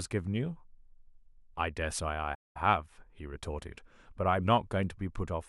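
At about 2.34 s the speech cuts out mid-flow and stays silent for roughly 0.2 s, picking back up around 2.57 s. That's a playback stall: the player most likely ran dry of buffered data, or its output thread got held up, so nothing was sent to the output until it caught up. It comes across as an abrupt hole in the speech, long enough to notice as a hiccup rather than a click.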